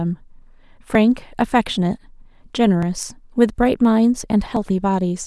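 Speech, with three abrupt skips at 0.95 s, 2.83 s and 4.57 s. Each is a jump in the sound with no gap of silence. The first and last lose around 15 ms of audio. The middle one loses only a few milliseconds. The likely cause is a dropped buffer (overrun). The recording software fell behind, the hardware overwrote unread samples, and the audio on either side was spliced straight together.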